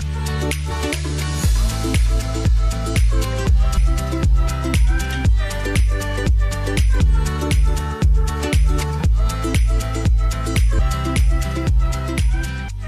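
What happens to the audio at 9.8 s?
Nothing goes wrong at 9.8 s; the audio plays through that moment intact, with no dropout, click or other fault.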